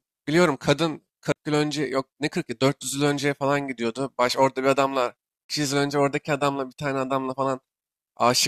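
The laser lost its track on the disc and jumped to a different turn of the spiral, twice, a CD skip each time. From 1.32 to 1.36 s the player muted for roughly 40 ms, then resumed from another point in the speech, and at 5.46 to 5.50 s it did the same with a mute of about 30 ms. Each is heard as a brief tick and dropout followed by an abrupt discontinuity, the speech picking up out of sequence.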